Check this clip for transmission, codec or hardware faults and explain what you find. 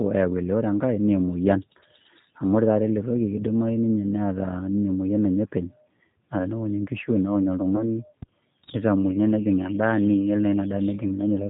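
Three faults are present, two of them brief and close together late in the clip.

Throughout, the speech passes through the G.729 codec at 8 kbit/s, rebuilt from a vocal-tract model and sparse pulses, so nothing above 4 kHz survives. The result sounds plainly rough and synthetic.

From 7.76 to 8.04 s there is VoIP packet loss concealed by the speech codec. About 20 ms of data went missing, and the decoder extrapolated from its previous frames. A fading smear, a buzzy tone or coloured noise, follows, and the weakened sound lingers until about 8.04 s.

From 8.22 to 8.31 s a phantom power thump occurs. A supply was switched on or off on the live input and the voltage step passed through the coupling capacitors. It is heard as a deep knock decaying within about 19 ms, just before "nitamuoi naa".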